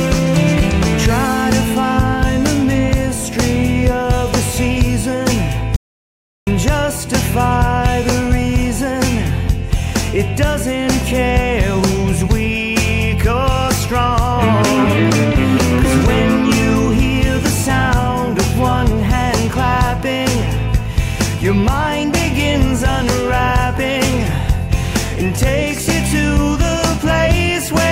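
At 5.76 s the sound drops out to silence until 6.47 s, an audio dropout to silence lasting about 0.71 s with no room tone underneath. That's likely a lost input leaving the recorder writing silence, so whatever happened there is gone.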